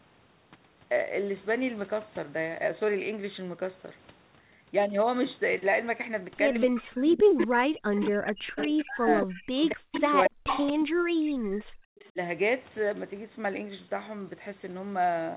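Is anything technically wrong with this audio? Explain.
Yes. The speech has an echo leak and, overlapping it, speech suppressed in double talk, both concentrated between about 6.6 and 12.2 s.

The echo leak appears at 6.60–6.64, 7.18–7.46, 7.97–8.11, 8.57–10.82 and 11.99–12.11 s. The far end is likely playing the call on a loudspeaker, and its echo canceller did not remove all of what its microphone picked up, so part of that sound was sent back. The returning copy trails the original by 224 ms. It ranges from a faint ghost, about 30 dB down at 12 s, to a full-level double at 7.2 s, and it lingers continuously from 8.6 to 10.8 s at about 5 dB below the speech.

Speech suppressed in double talk occurs at 6.67–9.27, 9.72–10.43 and 10.83–12.17 s. When both ends talked at once, the echo canceller likely could not separate the local talker from the loudspeaker echo and turned both down together. 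The talker's level drops by as much as about 40 dB, so the speech thins out or breaks into pieces. This gapping covers roughly 2 s in the first stretch, under half a second in the second and about 1 s in the third, all heard through the narrow telephone band of the call codec.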